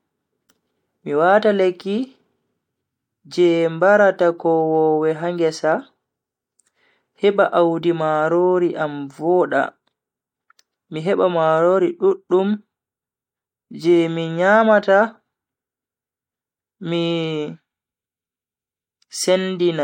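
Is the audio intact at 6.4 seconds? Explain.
Yes, at 6.4 seconds the audio is intact, with no dropout, click, distortion or other fault at that moment.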